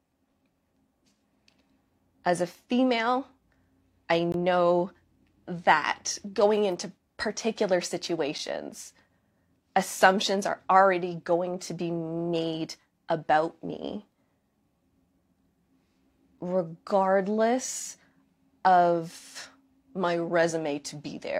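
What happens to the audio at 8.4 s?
At 8.38 s, just after "that going into particular", there is a gap between stream segments: the timestamps of two adjacent segments leave a small hole that the player fills with silence. It sounds like a hard-edged dropout of about 6 ms, with no audio lost.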